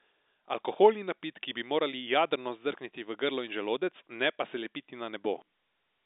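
Nothing stood out on listening to this speech, which comes through the narrow band of an ordinary G.711 telephone line with no energy above about 3.8 kHz.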